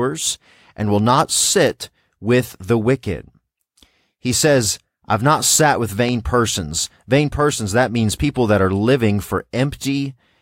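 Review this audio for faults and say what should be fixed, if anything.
A single loud pop hits the speech at 6.09 to 6.11 s, right after "I've not sat with". It peaks about 10 dB above the speech, which carries on underneath. The likely cause is a sudden voltage pulse, from a plug, switch or static discharge, added to the signal. Secure cables and ground equipment before recording.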